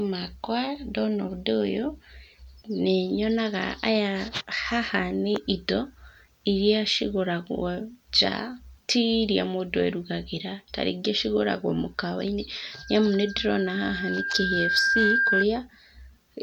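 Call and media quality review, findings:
Loudspeaker feedback squeal, 12.72–15.46 s. Steady 1.6 kHz tone swells over about two seconds, ending a few dB above the speech. Probable component: open mic picking up its own loudspeaker; loop gain exceeds unity at 1.6 kHz and self-sustains.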